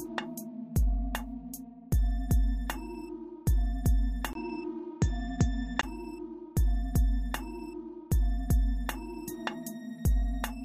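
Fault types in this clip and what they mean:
Input switched to a poorer device: from 4.33 to 5.83 s the sound turns duller, as if a different microphone had taken over, which is the likely cause. Everything above 7.7 kHz vanishes, so a spectrogram shows a flat ceiling cutting off the upper band. A 20 ms silence at 4.33 s appears as a flat gap in the waveform. Level stays about the same, and a new, very faint noise floor sits far beneath the signal.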